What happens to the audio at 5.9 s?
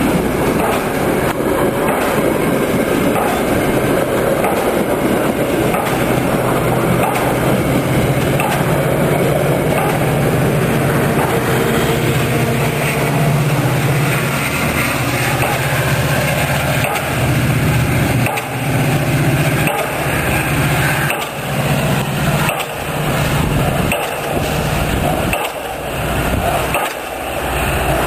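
Right at 5.9 s there's a case of compressed frames skipped. A couple of whole frames never get played, either because they're missing or the decoder threw them out as damaged, so the audio jumps ahead by roughly 40 ms, which fits 20 ms frames. At the seam the sound seems to lurch forward slightly.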